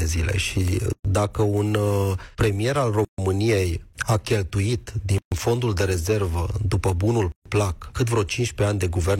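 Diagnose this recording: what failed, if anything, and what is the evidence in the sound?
The failure is at the codec stage: gaps at the joins of encoded pieces. The sound drops out to silence at 0.93–1.05 s (about 118 ms), then at 3.05–3.18 s, 5.18–5.32 s and 7.32–7.46 s (about 136 ms each), roughly every two seconds. Each gap has smeared edges, and the sound resumes exactly where it stopped. That fits separately encoded chunks stitched together without trimming each encoder's start-up delay and last-frame padding.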